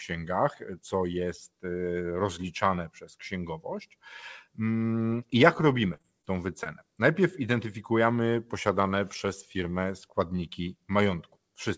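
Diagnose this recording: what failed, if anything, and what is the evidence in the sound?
The network stage failed, with repeated packet loss (robotic sound) from 5.94 to 6.25 s, right after "mm i jak robimy". Four separate holes fall inside that third of a second, about 80 ms of audio missing in total, the longest only 25 ms. The receiver's concealment regenerated roughly a quarter of the span. A single drop would leave one smear. Here the holes come in quick succession, so the voice turns choppy rather than briefly blurred.

A short concealed packet loss follows at 6.63 to 6.67 s, just after "i jak robimy tą". This is again a network fault: about 20 ms of audio arrived too late or not at all, and the decoder bridged it by extending the preceding sound before fading back into the real signal. Unlike a hard dropout or a digital click, there is no silence and no sharp edge, only a brief smear, since the missing piece was synthesised over. 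The call codec's band stops at 8 kHz, which fits G.722 at 64 kbps.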